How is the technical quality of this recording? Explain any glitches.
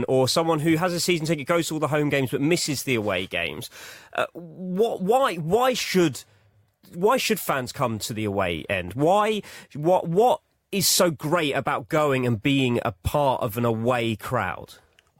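Nothing here needs explaining, since there are no glitches to hear anywhere in the recording.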